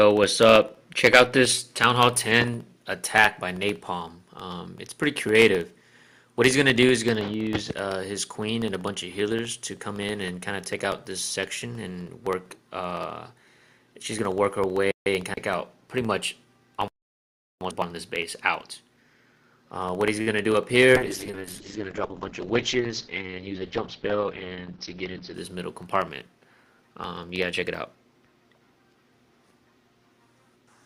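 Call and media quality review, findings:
Periodic USB or driver dropouts, 0.11 s through end of clip: short silent gaps every 64 ms, regular ticks audible wherever signal present; background task stalling USB bus or audio driver.

Short stall from a late packet, 20.21–20.29 s: sound held for 54 ms while jitter buffer ran empty, nothing lost, latency up 54 ms afterwards.

Short concealed packet loss, 20.53–20.56 s: 20 ms never reached decoder; receiver extrapolated last sound for 9 ms, then blended back, heard as brief smear.

Call bitrate drop, 20.97–25.40 s: encoder pushed from 48 to 8 kbps, audio band cut from 20 kHz to 6 kHz; coarse, muffled, watery until bitrate recovers.

Jitter buffer speed-up, 22.57–23.30 s: playback at 106% speed, same pitch, about 50 ms trimmed in pitch-period slices to drain excess buffered audio; sounds hurried.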